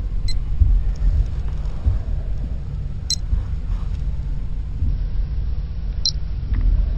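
A recording of everyday sounds, and for the first 4.89 s or so you can hear imaging from linear upsampling. The top end goes dull above about 6 kHz, and a faint metallic shimmer sits over the brighter parts. That fits material that started at a 12 kHz rate and was raised by simply joining samples with straight lines. That weak filtering leaves a mirrored copy of the spectrum between 6 and 12 kHz, roughly 25 dB below the signal.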